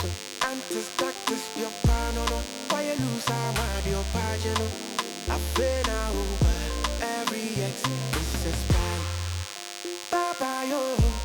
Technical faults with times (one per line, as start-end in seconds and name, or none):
0.00-11.24 DECT cordless phone buzz